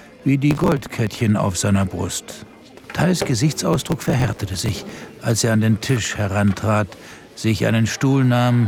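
Processor overload crackle appears from 0.51 to 1.21 s and again, longer, from 3.73 to 5.10 s. In both stretches the processor falls behind and misses many buffer deadlines in a row, skipping each late block so that tiny hard-edged gaps land between pieces of audio. The grain of the damage points to very short buffers, around a millisecond and a half. It is heard as a gritty crackling tear over the sound.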